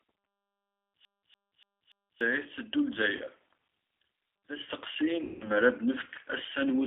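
Speech passed through a G.729 codec at 8 kbit/s is resynthesised from a coarse vocal-tract and pitch model, so it sounds audibly rough and synthetic, confined to roughly 300 Hz to 3.5 kHz. From 1.05 to 2.21 s, a disc scratch sends the player back at the same point each turn; this CD stuck on one turn repeats a 0.29 s fragment four times, with short mutes between repeats, like a skipping CD. VoIP packet loss concealed by the speech codec occurs twice. At 3.17 to 3.22 s, about 20 ms goes missing and the decoder patches it with a brief buzzy tone or coloured noise. From 5.22 to 5.48 s, a 180 ms gap is extrapolated into a fading buzzy tone or coloured noise, and the speech stays weak afterwards as the decoder recovers.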